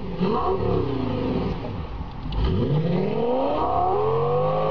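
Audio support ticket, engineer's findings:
Compressed frames skipped, jumps at 1.51 s and 3.93 s. Audio leaps ahead roughly 150 ms, then about 100 ms. Decoder/file side: whole 23.2 ms frames missing or rejected as damaged, playback just carries on from the next good frame.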